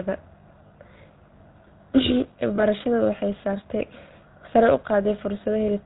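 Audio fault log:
throughout, GSM full-rate codec: a plainly audible buzzy, gravelly roughness with nothing above 4 kHz, from the vocal-tract model's pulse excitation, which fits 13 kbps, unlike plain band-limiting.
0.68–0.71 s and 2.56–2.64 s, lost GSM frames: brief rough, metallic ring as the last good frame repeats, suggesting one lost 20 ms frame each; a ring rather than a silent gap.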